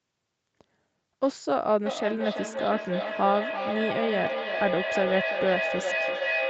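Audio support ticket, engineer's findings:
Feedback echo between two devices, 1.86 s to end. Speech returns roughly every 0.3 s, thinner and ringing, repeats piling up to about 3 dB below direct level. Second device's playback re-enters first mic; local echo canceller ignores foreign playback.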